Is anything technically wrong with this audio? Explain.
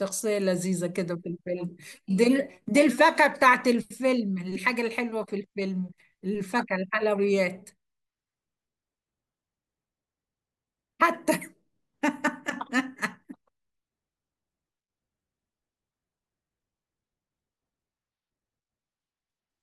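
No, nothing technically wrong can be heard in this speech recording. No fault turns up at any point in it.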